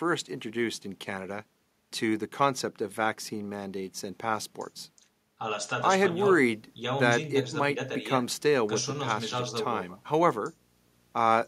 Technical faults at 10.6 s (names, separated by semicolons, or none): video or display buzz